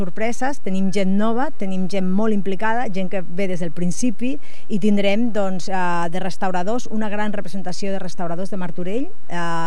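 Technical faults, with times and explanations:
Throughout: DC offset, with the waveform riding about -13 dBFS away from zero, wasting headroom; a spectrogram shows a steady band at 0 Hz.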